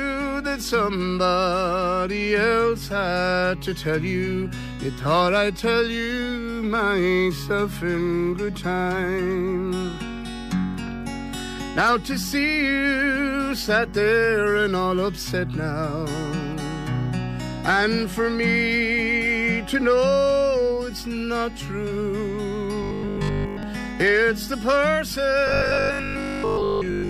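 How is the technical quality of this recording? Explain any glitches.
The recording has two bursts of robotic sound from repeated short buffers, from 22.83 to 23.63 s and from 25.47 s to the end. A rigid 50 Hz metallic buzz replaces most of the audio. It likely comes from a starved stream looping 20 ms chunks. Unlike plain dropouts, it fills the time with a fixed-pitch drone rather than silence.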